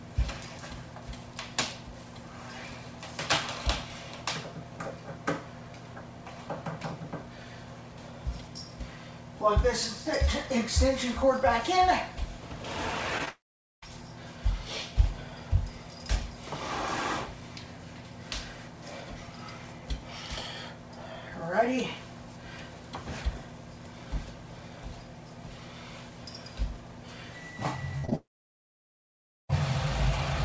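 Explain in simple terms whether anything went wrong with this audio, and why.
Several faults can be heard, from two different sources.

Between 9.89 and 11.38 s there are CD scratch ticks: seven tiny clicks, the longest lasting about 1.5 milliseconds. They come at a steady rhythm because the damaged spot on the disc passes once per turn. That regular rhythm is what sets them apart from network glitches.

Short concealed packet loss happens at 13.18, 13.25, 28.05 and 28.10 s. Each time, about 20 ms of sound never arrived. The player patched the gap by briefly stretching the previous sound, so you hear a quick smear rather than a hard break.

A burst of packet loss runs from 27.98 to 28.05 s. About 60 ms is missing, which is longer than a single smear. The last sound is held as a fading buzz or hiss, and then the audio picks up slightly further along.

A long network dropout happens twice, at 13.29 to 13.84 s and at 28.15 to 29.51 s. 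The sound fades into silence, about half a second the first time and over a second the second time. It then resumes with that part lost, most likely because the connection stalled.

The call connection itself keeps nothing above 8 kHz, which is normal for this kind of link.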